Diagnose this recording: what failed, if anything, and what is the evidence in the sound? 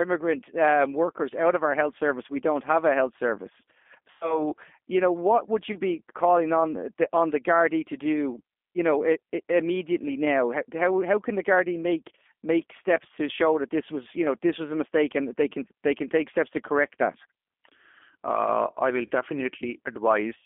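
The speech throughout is thin and boxed in, with nothing below about 250 Hz or above 3.5 kHz, and it has a plainly rough, slightly synthetic grain. This is a G.729 codec fault. At the codec stage, the voice is rebuilt from a vocal-tract filter, a pitch predictor and a few pulses per frame, which fits an 8 kbit/s G.729A stream.

At 4.11 to 4.40 s, 5.72 to 5.78 s and 19.07 to 19.12 s, the speech smears into a buzzy tone or coloured noise that fades, and stays weak briefly afterwards. This is VoIP packet loss concealed by the speech codec, at the network stage. About 100 ms, 20 ms and 40 ms of audio went missing, and the decoder extrapolated from its last frames with falling gain.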